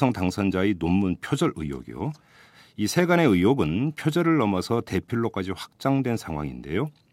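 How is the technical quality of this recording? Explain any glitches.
No technical glitches can be heard anywhere in this speech recording. There is nothing here that needs explaining.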